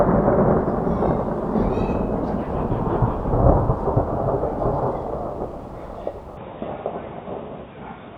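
At 6.37 s the sound turns dull and boxy without a gap, and stays so. Nothing sounds above 3.8 kHz, the level shifts by about 5 dB, and faint new background noise appears. Likely an input switched to a poorer device.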